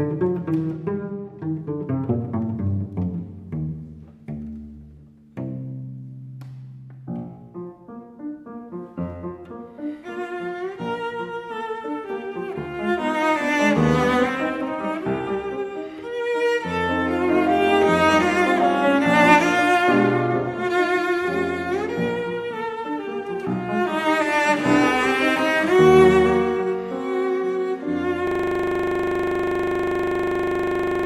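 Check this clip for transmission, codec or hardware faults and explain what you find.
One fault is present, a system hang loop from 28.27 s through the end. The system froze while the output kept replaying a 40 ms stretch of its buffer, so the audio becomes a rigid 25 Hz buzz. The waveform shows identical repeating blocks, and the spectrogram shows evenly spaced vertical stripes.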